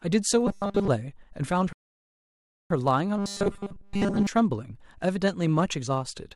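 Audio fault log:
throughout, block size mismatch (truncated): One stage in the chain hands on blocks slightly longer than the next stage takes in, so a sliver at the end of every block is dropped. Each cut leaves a small discontinuity, and because they recur at a steady 100 Hz, which fits a block of about 10 ms, the speech carries a low, constant buzz underneath it. The trimmed portion is small enough that the speech keeps its normal pace and pitch.
0.47–0.88 s and 3.18–4.27 s, robotic sound from repeated short buffers: The likely cause is new audio reaching the playback stage too slowly, so the software keeps replaying its last short buffer while the real signal slips past unheard. In both stretches, most of the audio is replaced by these repeats. Looping a 5 ms slice imposes a fixed 200 Hz tone, so the speech turns into a hard, metallic drone that only loosely follows the original contour.
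1.73–2.71 s, rebuffering stall: The player used up its downloaded audio and had to wait for more before continuing. The speech drops to silence for roughly a second, adding about 0.98 s to the running time, and then picks up exactly where it stopped. Nothing is skipped or repeated across the gap, so the only effect is a sudden, unnatural pause that breaks the flow of the speech.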